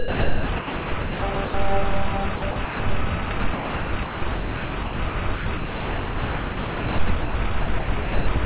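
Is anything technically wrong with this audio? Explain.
Yes. From 0.0 to 1.54 s, 2.36 to 2.8 s and 3.26 to 8.27 s, the sound is chopped by the voice detector, likely because the sender stopped transmitting whenever it judged the sound inactive. About 1.15 s, 0.26 s and 3.41 s of real sound were replaced by steady synthetic comfort noise. Unlike packet-loss dropouts, these gaps are filled with smooth hiss rather than silence or repeated fragments. The audio is band-limited to 4 kHz, which fits a narrowband call codec.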